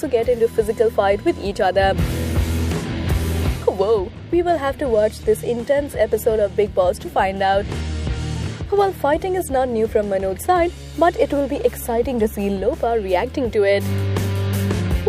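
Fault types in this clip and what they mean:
USB whine: a steady 1 kHz whine, about 30 dB below the sound, from 0.41 to 3.99 s, caused by 1 ms USB bus frames leaking into power or ground.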